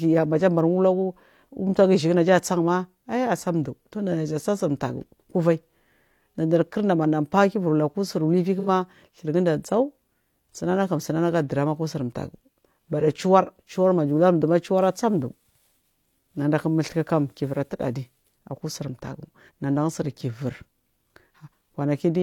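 At 8.59 to 8.69 s, between "faadija lu aku sur" and "du gunda", the speech turns briefly smeared and noisy, a tenth-second blur. This is AAC frame loss with concealment: the decoder rebuilt the gap from the last good spectrum, consistent with about two lost frames.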